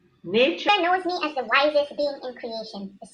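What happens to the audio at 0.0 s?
Nothing goes wrong at 0.0 s; the audio is intact there, with no dropout, click or distortion.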